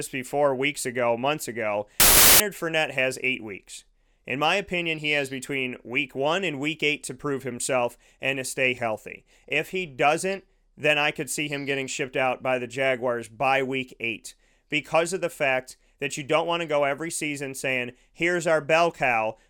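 From 2.0 to 2.4 s, after "weeks ago months ago", a wrong sample width, fitting 32-bit data read as packed 24-bit, buries the speech in loud noise, slowed to 0.75× and lowered in pitch.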